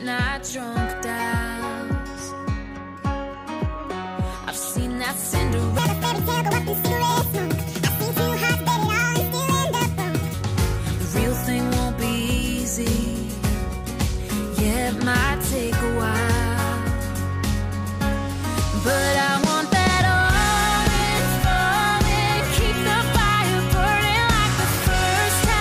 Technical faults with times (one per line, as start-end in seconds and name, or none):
5.79-10.34 section at the wrong speed